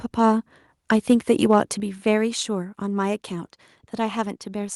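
From 0.91 to 1.62 s the speech hits a microphone overload: peaks run about 2 dB past the converter's limit, flattening a small fraction of samples into a harsh crackle, likely from input gain set too high. At 1.8 s there's a sudden microphone volume step down of 6 dB, with voice and background dropping together, likely the call software cutting the input after that clipping.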